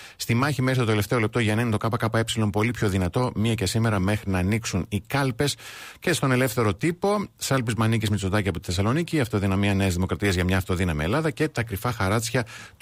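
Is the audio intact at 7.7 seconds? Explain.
Yes, at 7.7 seconds the speech is intact, with no audible dropout, click, distortion or other fault at that moment.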